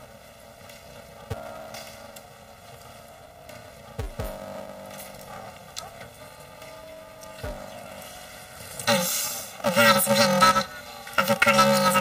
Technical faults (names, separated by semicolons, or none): planar audio read as interleaved